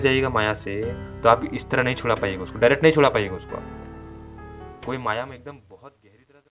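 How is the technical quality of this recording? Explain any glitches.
Nothing stood out on listening as a glitch, with the level easing down in a smooth fade out over roughly the last two seconds and the audio band-limited to 4 kHz, as expected from a 64 kbps G.711 mu-law call path.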